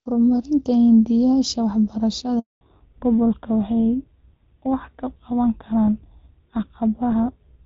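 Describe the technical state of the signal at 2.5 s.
At 2.5 s you're right in the middle of a handover gap, running from 2.39 to 2.61 s. The call hopped between networks and no speech frames came through, so the audio fades out within a few tens of milliseconds and sits silent for about 220 ms until the new link picks up.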